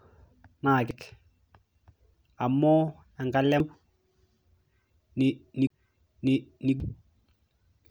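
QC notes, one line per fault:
0.91 s, 3.60 s and 6.80 s: damaged data in a compressed stream. Each is a brief chirp, squawk, click or short hole. At each point the compressed bytes are wrong, so the decoder misreads the frame, loses sync and scans for the next valid frame header, producing a short glitch.
5.67 to 5.70 s: CD skip. A silence of about 30 ms, after which the sound resumes from a different place rather than where it stopped. The laser has jumped to another turn of the disc's spiral, so the player mutes briefly and picks up a whole number of disc turns away. What sets it apart from stream damage is the continuity break, with no chirp of misdecoded data.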